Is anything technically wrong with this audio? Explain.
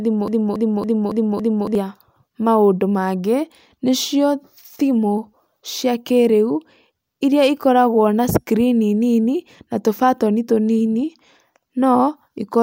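Yes. From 0 to 1.75 s, already under way when the clip opens, a broken-record loop repeats a 279 ms speech fragment five times back to back, likely from a stalled player or stream resending its last buffer.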